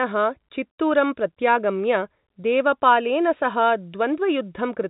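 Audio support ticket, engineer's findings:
No faults found in this clip.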